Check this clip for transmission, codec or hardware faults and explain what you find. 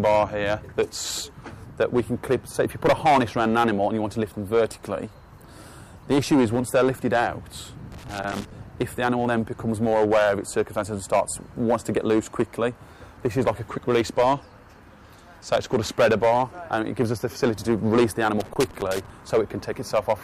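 Two hardware-type faults are present: loose connector crackle twice and a single bit error spike.

From 7.92 to 8.51 s and again from 18.4 to 19.10 s there is loose connector crackle. A worn contact makes and breaks as it shifts, chopping the signal into an irregular scratchy burst. The waveform shows ragged dropouts, and the spectrogram shows scattered broadband vertical streaks.

At 10.70 s a bit error spike occurs: one flipped bit throws a single sample to about -35 dBFS before it snaps back. It is a lone sharp tick unrelated to the sound, a one-sample needle in the waveform and a thin full-height line on the spectrogram.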